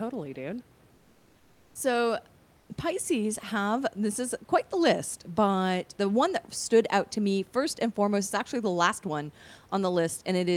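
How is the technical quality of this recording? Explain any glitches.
The recording has steady room noise about 33 dB below the speech, and twice the background briefly turns into a smoother, slightly quieter hiss. Comfort noise in place of the background appears from 0.95 to 1.75 s and again from 2.57 to 2.69 s. The real room sound gives way to flat, featureless noise, about 2 dB and about 3 dB lower respectively. The likely cause is discontinuous transmission of the Opus DTX kind: the sender stops during pauses, and the receiver fills them with synthetic noise shaped roughly like the background.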